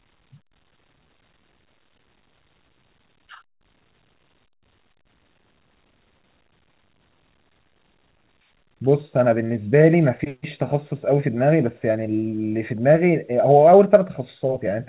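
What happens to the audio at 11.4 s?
At 11.4 s the speech runs on intact, with no dropout, glitch or distortion, only the steady telephone-band sound of the call path, which carries nothing above 4 kHz, consistent with a G.711 A-law codec at 64 kbps.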